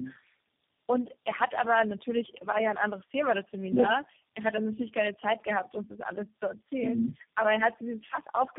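Tandem speech coding runs throughout: four speech coders in series each re-encode the previous one's damage, leaving rough, warbly, muffled speech with nothing above 3.7 kHz.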